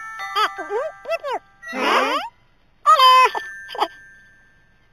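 Throughout, audio sampled at 8 kHz was raised to 44.1 kHz by straight-line interpolation, causing imaging from linear upsampling. The top of the original band is dulled, and a mirrored copy from 4 kHz to 8 kHz, roughly 20 dB down, adds faint metallic shimmer.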